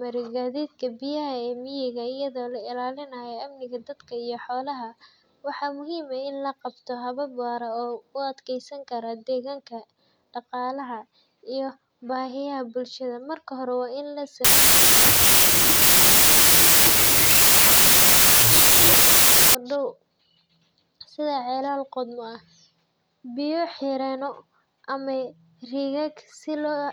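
Speech, with a wrong sample width fault from 14.45 to 19.55 s, right after "hore waa in la". Packed 24-bit samples read as 16-bit produce loud noise from mismatched bytes, with the speech buried in it, playing at 0.667 times speed and correspondingly lower pitch.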